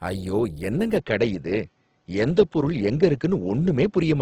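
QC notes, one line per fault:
throughout: Opus compression. Speech carries a grainy, rough texture, with plainly audible damage in the harmonics. There are few hollow gaps and little swirling. Band energies seem held while the fine detail inside each band is filled in or replaced with noise. The full bandwidth is kept and the speech mode's muffled hoarseness is absent. The sound likely points to the music (CELT) mode running short of bits, which fits a bitrate near 16 kbps.
0.96 s to end: input switched to a poorer device. From 0.96 s the speech abruptly turns duller, with nothing above 7.6 kHz for the rest of the clip. There is no gap at the change and no step in loudness, so the switch is heard only as lost top end and a different tone. A faint new background noise sits far below the speech. This likely reflects the system moving to a narrower-band microphone or a headset call profile.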